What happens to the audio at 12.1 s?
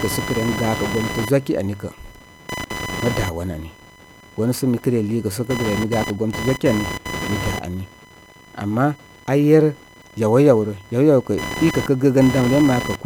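Computer activity noise runs through 12.1 s, as throughout: load changes shift the shared ground, adding buzzing, chirping or scratching near 1 kHz about 10 dB under the speech.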